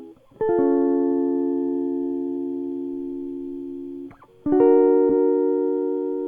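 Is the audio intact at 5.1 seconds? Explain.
No. From 5.09 to 5.17 s a run of compressed frames was delivered twice, so the decoder replays that same 80 ms block of the music, a span that fits about four frames. This is repeated frames: a brief stutter that lengthens the clip by 80 ms.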